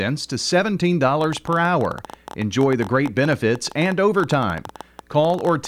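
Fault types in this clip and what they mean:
Train of clicks: from about 1.21 s to the end, an uneven ticking of around a dozen clicks a second, roughly fifty in all, each nearly the same shape and poking a few dB above the speech, even in pauses. Likely interference or a faulty connection.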